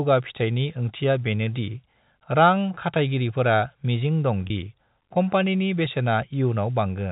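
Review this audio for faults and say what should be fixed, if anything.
A packet loss with pitch repetition occurs from 4.47 s to 4.50 s, just before "दि कम्पानिनि". About 30 ms of audio, which fits a single lost packet, never arrived, so the receiver filled the gap by repeating the last pitch period. The sound briefly holds with a slightly buzzy quality before the speech picks up, heard through the band-limited G.711 telephone coding. Forward error correction or redundant packets on a lower-loss link would prevent it.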